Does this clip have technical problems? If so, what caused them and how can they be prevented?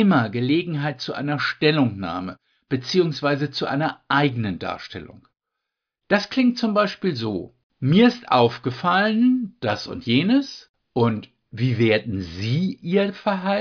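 No, this speech clip has no audible technical faults. There is nothing here to trace to a cause, so no preventive steps are needed.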